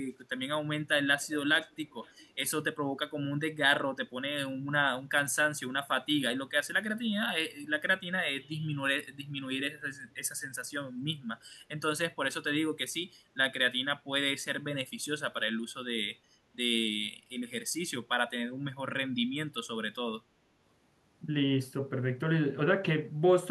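From 1.21 to 1.35 s and 1.65 to 2.31 s, an echo leak: a faint copy of the speech trails 332 ms behind, likely loudspeaker pickup an echo canceller missed.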